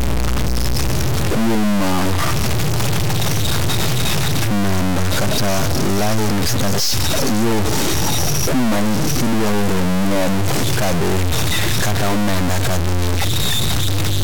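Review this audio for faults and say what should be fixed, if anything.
A stuck bit runs through the whole recording. The speech carries a harsh, buzzy distortion from start to finish, and the pauses between phrases fill with noise instead of falling silent. The offset involved is large, a step of roughly -10 dBFS, so the error sits in a high-order bit. The likely cause is one data bit held at a fixed value, so about half the samples are shifted by that bit's weight. Near zero the error flips with the sign of the signal, which is why the quiet gaps turn noisy.

To prevent it, test the converter and its data lines with a ramp or sine signal before recording, and replace any connection or converter whose output shows a bit that never changes state.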